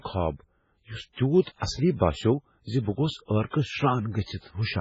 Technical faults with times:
0.00-4.80 MP3 compression

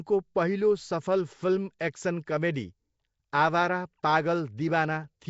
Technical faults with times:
0.00-5.29 Nellymoser compression
1.79 pre-echo

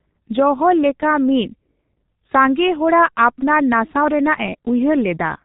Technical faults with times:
0.00-5.44 G.723.1 codec

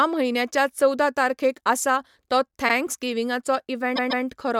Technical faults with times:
2.68-2.73 repeated frames
3.95-4.24 repeated frames

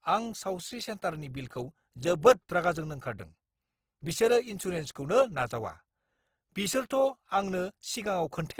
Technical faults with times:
0.00-8.60 Opus compression

